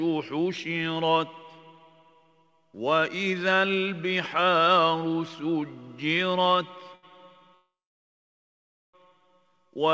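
Audio that stops at 8 kHz, which fits a G.722 call path at 64 kbps, has a held sound from 6.95 to 7.05 s. That 77 ms short stall from a late packet comes from the jitter buffer running dry, so the receiver stretched the last sound until the packet came and then resumed with nothing lost. From 7.55 to 8.95 s a call audio freeze sets in: a brief fading fill, then about 1.22 s of silence, 1.39 s in all. It was likely caused by packets held up in transit emptying the buffer, after which the audio picks up where it stopped.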